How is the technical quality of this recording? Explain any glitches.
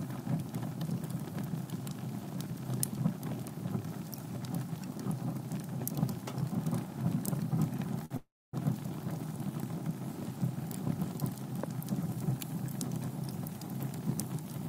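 Two playback interruptions close together around 8 seconds affect the technical quality of the recording. In both, the sound stops and then resumes where it left off.

From 8.05 to 8.12 s there is a short stall from a late packet. A packet missed its playout time and the jitter buffer emptied, so the receiver held the last sound for about 51 ms until the data arrived. Playback then continued from the same point with nothing dropped. It is heard as a brief smear or slight buzz, and everything after it plays 51 ms later than before.

From 8.16 to 8.55 s there is a call audio freeze lasting 368 ms. The sound first extends as a decaying buzz, then goes fully silent for roughly the last 270 ms before normal audio returns from where it stopped. No content is missing, but the gap adds another 368 ms of delay. The likely cause is packets held up in transit long enough to drain the jitter buffer completely, with the receiver filling the wait with fading concealment until they arrived.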